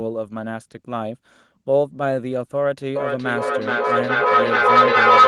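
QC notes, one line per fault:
2.94 to 5.27 s, feedback howl: from 2.94 s a tone around 1.5 kHz starts building under the speech and doesn't let go, peaking about 10 dB louder than the talker and still going when the clip ends. It pulses roughly every 0.4 s, which points to a loop from a loudspeaker back into a microphone in the same room. Each pass adds gain, so the repeats get louder rather than decaying.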